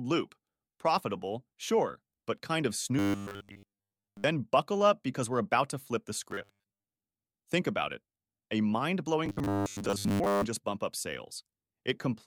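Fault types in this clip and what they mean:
Robotic sound from repeated short buffers: new audio was likely reaching the playback software too seldom, so it kept replaying the last 10 ms or so in place of the missing signal. This stamps a fixed 100 Hz buzz onto the voice, and most of the real audio is skipped. Three stretches turn rigid and metallic: 2.99 to 4.24 s after "sure but kind of", 6.31 to 6.87 s after "about to flip the", and 9.26 to 10.44 s before "just bump up".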